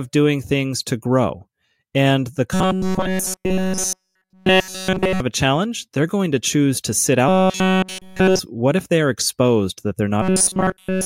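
From 2.54 to 5.20 s, before "a challenge they're going", the speech becomes a rigid metallic buzz at 188 Hz. It returns from 7.29 to 8.39 s, between "to choose to sit" and "what if they are", and from 10.22 s to the end, after "they are exposed that". This is robotic sound from repeated short buffers, likely caused by a roughly 5.3 ms chunk being looped in place of nearly all the real audio.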